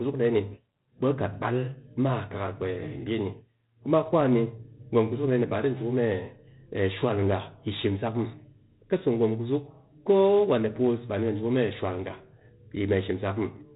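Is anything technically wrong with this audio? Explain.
Yes. Throughout the speech there is heavy 4-bit ADPCM compression: each sample is coded as a coarse step from a prediction, so gritty hiss rides on every loud syllable and consonant attacks crack. Nothing passes above 3.8 kHz, which fits a 32 kbps stream. Unlike lossy-codec swirl, the noise simply tracks level.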